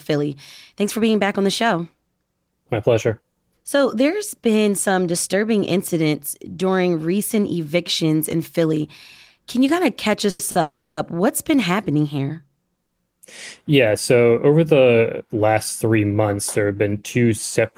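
Right after "you kind of catch", at 10.30 s, there's a short stall from a late packet: the jitter buffer ran dry, so the receiver stretched the last bit of sound for about 90 ms until the packet turned up, then carried on from the same spot. You hear a syllable held a touch too long with a slight buzz or dip. It happens again at 10.51 s, a 40 ms hold this time. Nothing's actually lost in either one. The speech just slides about 130 ms later overall.

Then from 10.61 to 10.99 s you get a call audio freeze. The sound hangs as a fading buzz or hiss and then drops to silence for roughly 270 ms of its 360 ms. The likely cause is packets held up in transit long enough to empty the buffer completely. Once they arrive, the talk resumes exactly where it stopped. So that's a gap inserted into the speech rather than a chunk cut out, pushing everything after it later still.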